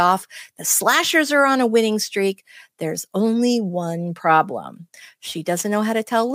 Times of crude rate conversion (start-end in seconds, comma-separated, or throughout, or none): 4.80-6.34